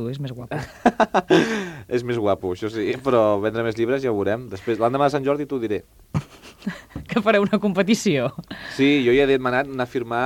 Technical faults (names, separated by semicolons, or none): none